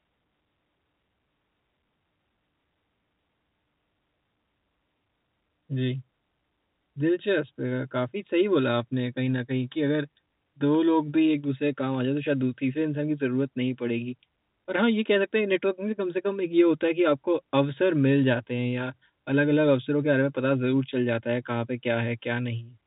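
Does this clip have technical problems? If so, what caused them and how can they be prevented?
No, there's nothing wrong with this speech clip; it's just carried over ordinary G.711 telephone coding, which is why nothing above about 3.8 kHz comes through.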